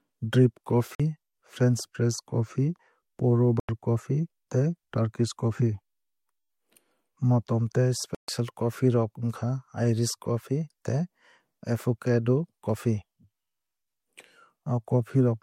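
Speech that drops to dead silence three times, from 0.95 to 1.00 s (about 46 ms), 3.60 to 3.69 s (91 ms) and 8.15 to 8.29 s (136 ms), each gap growing longer before the sound carries on. On a waveform these are flat-line gaps with abrupt edges; a spectrogram shows clean vertical blank columns across all frequencies. The pattern is likely a Bluetooth stall: held-up packets left the receiver's buffer empty until retransmissions arrived.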